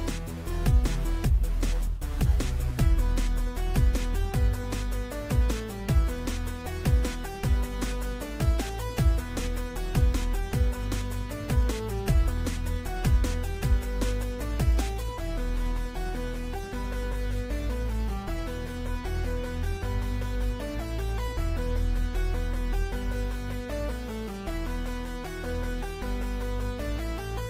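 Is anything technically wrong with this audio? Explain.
No, nothing technical stands out here; it all sounds fine as far as I can hear.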